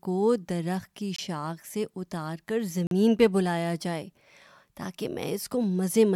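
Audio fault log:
1.16–1.18 s and 2.87–2.91 s, block of digital silence: speech drops to silence for about 21 ms, then 43 ms, with no fade. The gaps fit 1024- and 2048-sample output blocks left unfilled. The waveform shows a flat line, and the spectrogram shows a blank vertical band with hard edges.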